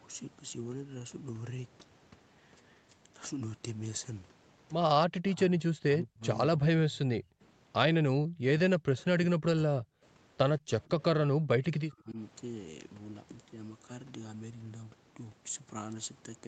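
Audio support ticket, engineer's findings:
Speech suppressed in double talk, 5.05 to 12.18 s: speech dips or drops out in pieces at 5.05–6.22, 6.47–7.41, 8.0–8.45, 8.7–8.98, 9.15–10.03, 10.59–10.9 and 11.12–12.18 s. Deepest drops around 40 dB, shallower (around 25 dB) at 6.47–7.41 s. Likely cause: near-end echo canceller, unable to separate near talker from loudspeaker echo during overlap, attenuating both.

Echo leak, 8.99–9.03 s: brief delayed copy of the voice, roughly 180 ms behind, about 30 dB under the speech. Likely cause: residual loudspeaker echo not fully cancelled at the far end and sent back. Heard alongside the 8 kHz Opus band limit.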